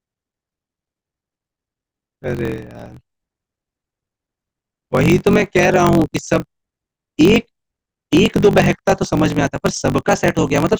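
From start to finish there's a block size mismatch with truncation: one stage hands over bigger blocks than the next reads, and each block's tail gets chopped. You hear a steady buzz near 47 Hz, which fits 1024-sample reads, and the speech runs about 1.12 times fast with its timbre intact.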